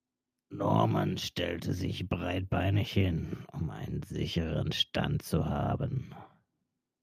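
From 2.19 s to 3.27 s, after "stellte sich" and before "um einen sicheren", the automatic gain is rising: the control judged the input too quiet and lifted its gain by about 4 dB over roughly a second, so the speech and background noise swell together.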